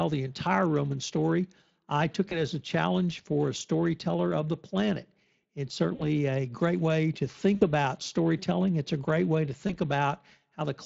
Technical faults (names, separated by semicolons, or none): Speex codec; VoIP packet loss concealed by the speech codec